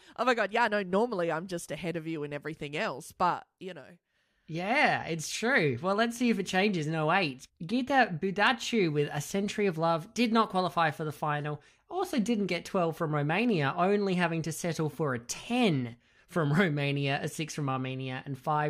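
No technical faults are audible.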